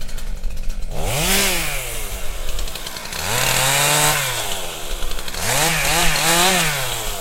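Everyday sound with regular clicks every 1.17 s from 0.46 to 6.30 s, likely clock drift buffer slips from roughly 300 ppm clock mismatch dropping or repeating small sample blocks.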